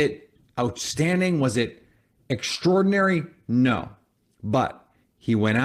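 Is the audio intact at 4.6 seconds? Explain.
Yes, the audio is intact at 4.6 seconds, with no audible fault at that moment.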